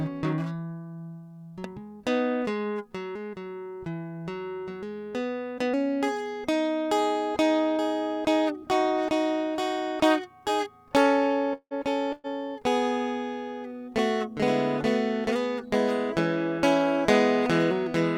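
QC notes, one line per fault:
11.53–11.74 s, long network dropout: the music trails off into a fading buzz or hiss, then goes briefly silent. Likely about 180 ms of audio never arrived.
12.13–12.27 s, burst of packet loss: about 120 ms is missing. The receiver stretches the last sound and fades it out, then the music resumes further on.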